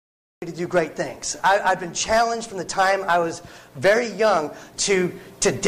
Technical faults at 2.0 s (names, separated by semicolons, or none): none